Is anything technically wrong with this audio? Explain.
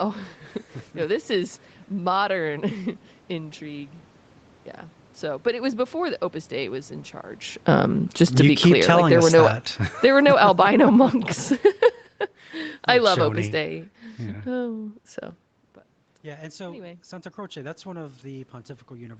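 Yes, the automatic gain control is misbehaving in two places.

From 7.59 to 14.74 s, just after "was in charge", there is automatic gain falling. The talker moves around 7.5 s, and the control answers by easing its gain down by about 14 dB over several seconds. Speech and room noise sink together until "so but".

From 16.22 s to the end, after "so but", there is automatic gain rising. The input drops by about 20 dB as the talker moves away around 15.5 s. The control slowly raises its gain to compensate, so the voice and background swell upward together.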